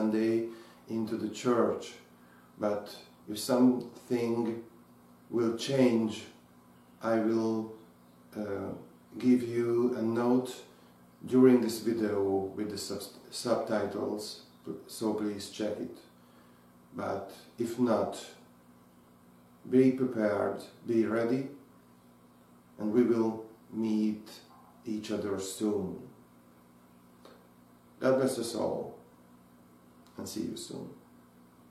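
Nothing is technically wrong with this audio.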